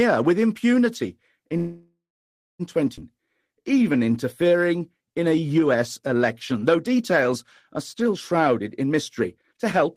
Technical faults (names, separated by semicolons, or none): call audio freeze; skip ahead; jitter buffer slow-down; jitter buffer speed-up